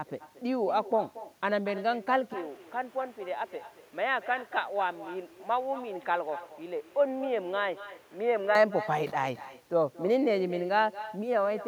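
Speech runs for the whole clip, shadowed throughout by echo with no canceller: each phrase returns as a thinner copy about 15 dB quieter and roughly a fifth of a second late, as the far end's loudspeaker feeds its microphone and nothing subtracts it. On a spectrogram every syllable has a faint duplicate trailing it by that offset, and the waveform shows small echoed bursts filling the gaps between phrases. From 2.34 s to 8.55 s the tone turns dull and boxy with no gap at either edge, most likely because the input switched to a poorer device. The band narrows, the level drops about 5 dB, and a new noise floor appears roughly 30 dB below the speech. On a spectrogram that stretch shows a lower ceiling on the high frequencies and a faint haze of background noise. The waveform envelope visibly shrinks across the same span.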